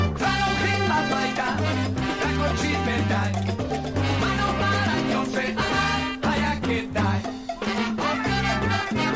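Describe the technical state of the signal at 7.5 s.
Around 7.5 s the audio is intact, with no audible fault at that point.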